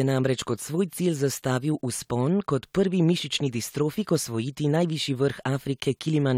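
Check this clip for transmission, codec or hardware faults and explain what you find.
No faults turn up when checking the clip.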